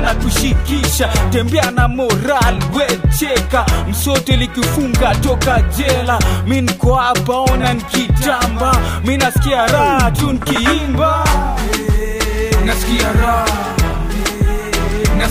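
No technical faults can be heard anywhere in the clip.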